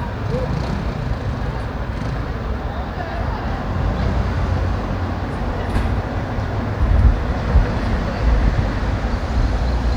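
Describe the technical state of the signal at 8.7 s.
At 8.7 s the signal is intact, with no dropout, distortion or other fault audible at that moment.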